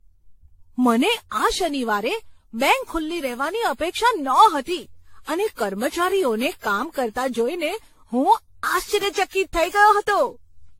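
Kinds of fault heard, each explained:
generation loss: The speech was likely decoded and re-encoded roughly fifteen times through a lossy codec, each pass quantising anew on a shifted frame grid. Errors accumulate into a swirly, hollow, smeared tone with blurred consonant attacks and nothing above 16.5 kHz.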